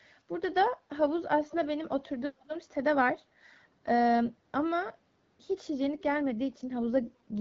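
Echo leak at 1.48 to 1.56 s and again at 2.39 to 2.49 s in this speech recording: brief scraps of the voice return 390 ms late, the first about 15 dB below the speech and the second much fainter, around 35 dB down. This is likely a far-end loudspeaker whose echo canceller let part of its microphone pickup through and back down the line. An AMR rate drop runs from 5.78 s to 7.38 s. The voice grows rougher and more synthetic while the bandwidth stays unchanged and no gap opens. The sound points to the AMR wideband (HD Voice) codec being switched from 12.65 kbit/s to roughly 8.85 kbit/s to free bits for error protection on a weak radio link, before that the codec shows only light coding damage.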